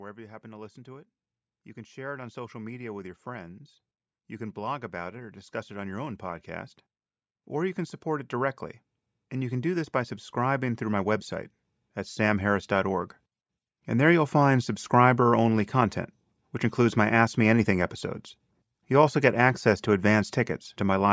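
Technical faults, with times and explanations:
1.73 to 3.68 s, 4.27 to 6.76 s and 9.33 to 11.31 s, automatic gain rising: the automatic gain control judged the input too quiet and pushed its gain up slowly, by about 4 dB, about 5 dB and about 4 dB in turn. Over roughly two seconds each time, the speech and the room noise behind it swell together, the third rise following "can support it directly"; the call's microphone processing, which passes nothing above 8 kHz, is working normally.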